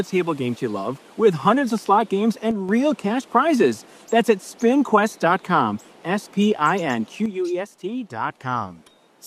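A stereo channel likely drops out twice, from 2.51 to 2.69 s and from 7.26 s to the end. In the mono sum, the sound shared by both channels falls abruptly by about 6 dB, and anything carried only in the lost channel disappears.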